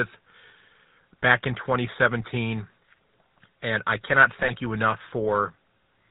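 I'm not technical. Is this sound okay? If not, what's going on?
No. The speech carries a GSM full-rate codec sound from start to finish: the old mobile-phone encoder rebuilds the voice from a simplified model and discards everything above 4 kHz, so it sounds buzzy, gravelly and muffled, like an early cellphone call.

There are also GSM bit errors from 4.43 to 4.51 s, right after "I cannot" and just before "you enough". Corrupted data reached the decoder, which briefly rebuilt the sound wrongly, producing a short squawk or gargle lasting under a tenth of a second.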